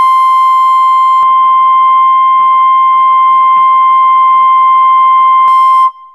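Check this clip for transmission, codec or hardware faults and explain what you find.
There's one fault in this music clip. From 1.23 to 5.48 s, the top end vanishes above 3.7 kHz with no gap and no level jump, plus a faint new hiss. That likely means the input switched to a poorer device.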